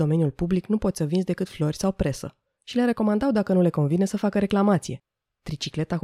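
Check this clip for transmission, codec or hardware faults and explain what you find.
Nothing in the recording points to a transmission, codec or hardware problem.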